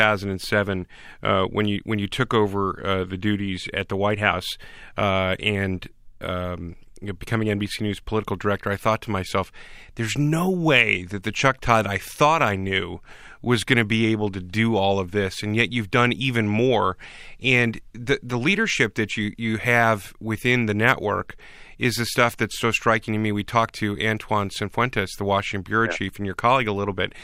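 Nothing in this recording stands out as a technical fault, so there's no moment in it that calls for comment.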